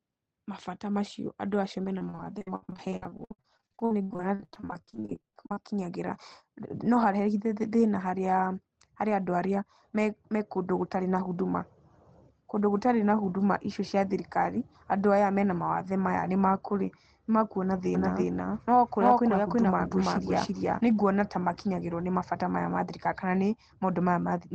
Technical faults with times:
1.98-5.57 repeated packet loss (robotic sound)
17.95-20.81 doubled audio track

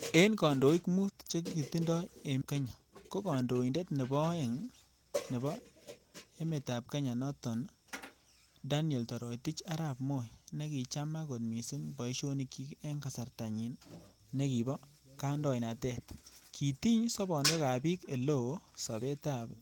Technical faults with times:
2.41-2.43 skip ahead
3.09-3.43 jitter buffer speed-up

